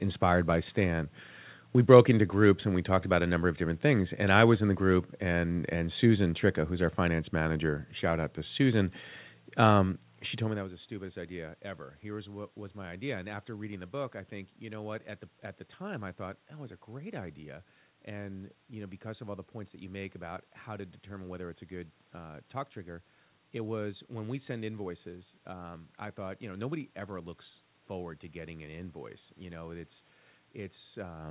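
No technical faults can be heard anywhere in the recording. The speech comes through a call path whose band stops at 4 kHz, which fits narrowband G.711 A-law coding, and around 10 or 11 s the level shifts as the talker moves relative to the microphone.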